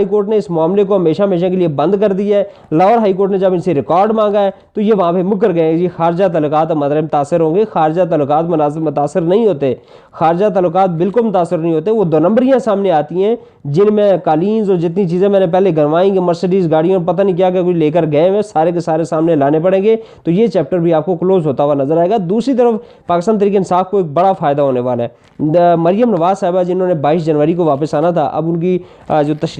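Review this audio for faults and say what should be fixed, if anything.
No technical faults can be heard anywhere in the signal, so nothing needs fixing.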